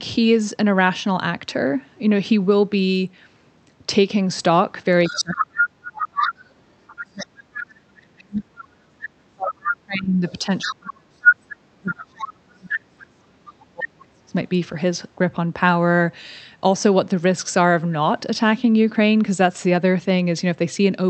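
From 5.05 to 6.33 s the other side's voice leaks through at about 5 dB below the speech, likely residual loudspeaker echo that the echo canceller failed to remove. Further leaks occur at 6.87 to 7.26, 8.22 to 8.65, 9.64 to 9.74, 10.29 to 11.35 (about 5 dB above the speech) and 12.19 to 12.75 s. Overlapping these, from 5.1 to 6.4 s and again from 7.01 to 14.35 s, the near talker's speech is suppressed in double talk, dipping by up to about 40 dB, likely because the canceller attenuated speech and echo together.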